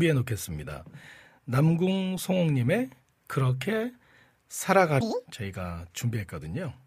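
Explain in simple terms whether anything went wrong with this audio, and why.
Audio read two samples at a time (double speed) hits from 5.01 to 5.26 s, a quarter-second burst where the speech suddenly races and jumps up in pitch. The playback system grabbed the stored sound in pairs and treated each pair as a single step, as if the audio had two channels or larger samples. That makes it run twice as fast and an octave higher.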